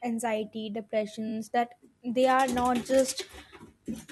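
Repeated frames at 1.28 to 1.32 s: a single 21.3 ms slice of the speech plays three times in a row, which points to one compressed frame being written or sent twice more than it should. The result is a brief stutter that stretches the audio by 42.7 ms.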